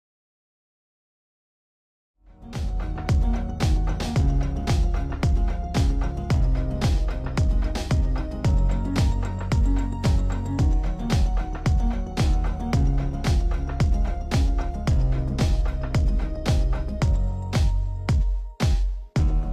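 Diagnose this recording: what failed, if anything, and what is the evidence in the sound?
Nothing failed at any stage: the only level change is a smooth fade-in from around 2 s to full level at 3.21 s, an editor's fade with no click or hard edge.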